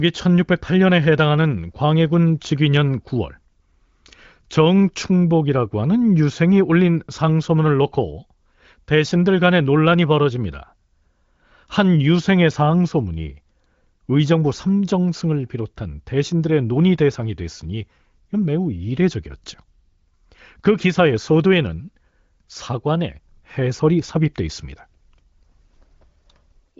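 Speech carried over the AMR wideband (HD Voice) codec, with nothing above about 7.5 kHz, and no technical fault can be heard.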